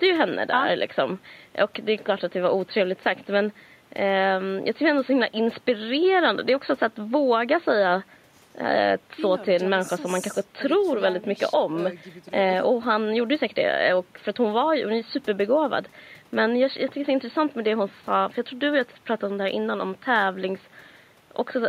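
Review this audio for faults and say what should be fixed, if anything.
Nothing here needs fixing; there's just a faint bit of background from the room sitting about 36 dB under the speech, and that's simply part of the recording.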